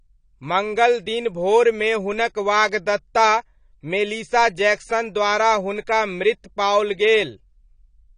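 From start to finish, the speech sounds dull and smeared. Nothing is heard above 9.9 kHz, so the top of the spectrum is simply gone. Sibilants turn fizzy, and sustained sounds warble. This is likely AAC compression, in its AAC-LC form. The damage is plainly audible, which fits a low bitrate of around 32 kbps. At such a rate the encoder pulls its cut-off down and quantises coarsely, leaving gaps in the spectrum.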